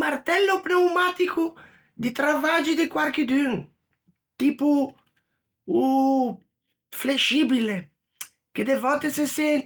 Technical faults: none

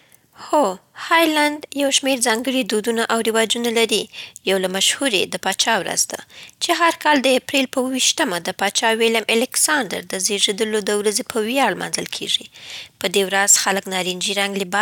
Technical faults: none

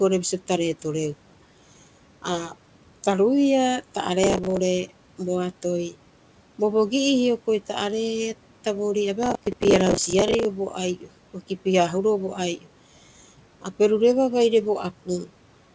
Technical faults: processor overload crackle; speech cut by the noise suppressor

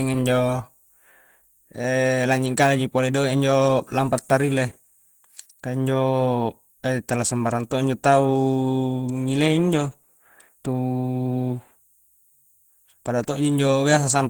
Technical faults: Opus compression

